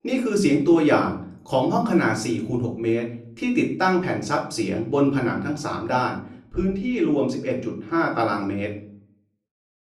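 From 6.19 s to 8.19 s the sound turns dull and muffled, the mark of de-emphasis applied wrongly: a treble cut meant to reverse pre-emphasis landed on audio that never had that boost, or was applied a second time. The response falls away gently with rising frequency, down about 8 dB at 10 kHz relative to 1 kHz. Unlike a low-pass filter, there is no sharp cut-off edge, just a smooth, progressive slope that dims the top end.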